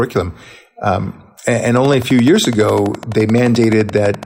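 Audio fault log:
1.77–4.24 s, train of clicks: a steady ticking enters the speech and runs to the very end, about 12 clicks per second at an even pace, some 30 in all, each with much the same sharp shape and peaking a few decibels above the speech, so they stand out over syllables and gaps alike. The repeated near-identical pulses likely come from electrical interference or a faulty connection or power supply injecting a spike at a fixed rate.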